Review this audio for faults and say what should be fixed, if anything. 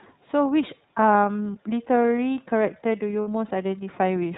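The iLBC codec shapes the whole clip. Speech is band-limited to 4 kHz and sounds plainly rough and synthetic, consistent with the 13.33 kbps, 30 ms mode. A spectrogram shows a hard ceiling at 4 kHz with smeared, grainy harmonics. Prevention: use a wideband codec such as Opus.

Lost iLBC frames appear from 3.21 to 3.28 s, a gap of about 60 ms, which points to two missing 30 ms frames. The decoder fills it by repeating the last pitch cycle blended with noise, so it sounds like a held, faintly buzzy vowel. On a waveform this shows as a periodic stretch of near-identical cycles. On a spectrogram it shows as flat, unchanging harmonic lines with added noise. The voice is right again almost at once afterward. Prevention: add forward error correction or redundancy and a larger jitter buffer.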